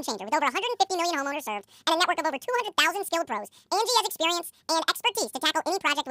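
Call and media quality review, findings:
Reader treating sample pairs as single frames (channel count or sample width misread): audio read two samples at a time (double speed). Entire speech clip plays at 2x, pitch up 12 semitones (one octave).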